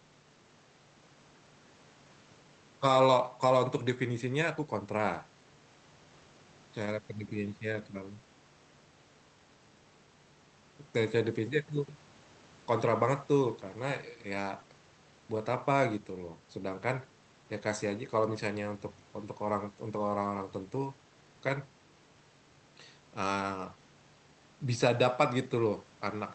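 No technical faults can be heard in this speech recording. It has gone through a call path whose codec limits the audio to 8 kHz, so nothing is present above that point, and the codec leaves its usual coding noise.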